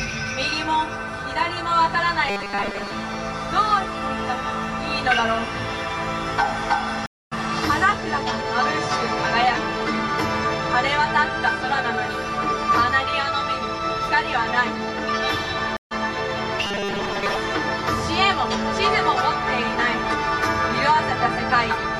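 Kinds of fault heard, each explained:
Robotic sound from repeated short buffers: From 2.28 to 2.91 s and again from 16.67 to 17.36 s, the sound collapses into a rigid metallic buzz pitched at 200 Hz. That pitch points to a 5 ms slice being looped, and about 70 percent of each stretch is repetition rather than new audio. This is likely caused by audio arriving too seldom, with the software replaying its last short buffer to fill the gap while the real material is skipped.
Stream reconnect: At 7.06 s the audio drops out for 254 ms, and at 15.77 s for 141 ms. In both places the connection broke, the player sat silent, reconnected and started a fresh decoder partway into the stream. When the sound comes back it has jumped ahead, by roughly 300 ms after the first gap and roughly 100 ms after the second, so the material that fell inside the dropout is simply missing.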